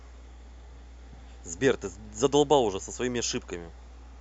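Mains hum runs throughout: power-line current leaking into the signal path, through a ground loop or nearby transformer, leaves a steady 60 Hz drone about 20 dB below the speech.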